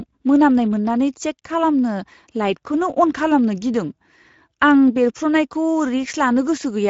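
From start to finish the speech carries plainly audible Speex codec damage. The voice has a hoarse, grainy roughness, because this CELP coder has few bits left to describe the excitation, so the buzz behind each sound is only loosely matched. Everything above 7.7 kHz is gone. The damage fits a middle setting of roughly 17 kbps. Unlike the swirling, watery artefacts of a transform codec such as MP3, the degradation here is noisy and hoarse.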